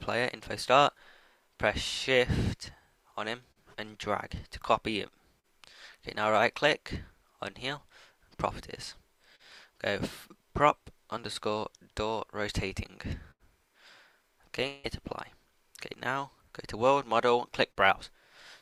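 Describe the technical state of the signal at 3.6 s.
A short concealed packet loss spans 3.51 to 3.59 s. About 40 ms of audio arrived too late, and the decoder filled it by extending the preceding sound before blending back. That produces a brief smear or wobble rather than the silent gap of an unconcealed dropout.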